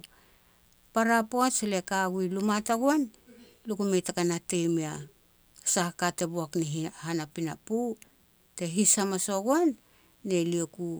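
Mains buzz runs throughout the speech: switching spikes twice per 60 Hz cycle leak in, producing a steady, raspy buzz sitting roughly 40 dB below it.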